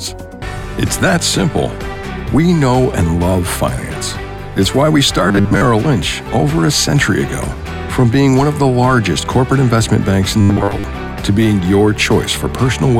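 Robotic sound from repeated short buffers occurs from 5.28 to 5.61 s and again from 10.41 to 10.84 s: the sound collapses into a rigid, metallic buzz at 100 Hz, most likely from a roughly 10 ms buffer being replayed while most fresh audio was skipped.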